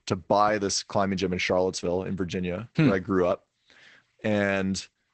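From start to finish the speech carries Opus voice compression of a plainly audible kind. The SILK coder, working wideband, passes nothing above about 8.5 kHz, so consonants lose their air and the voice sounds muffled, with a coarse, slightly hoarse and robotic grain from sparsely coded excitation, which fits a rate near 12 kbps and 20 ms frames. A spectrogram shows a flat ceiling at 8.5 kHz and smeared, blocky detail below it.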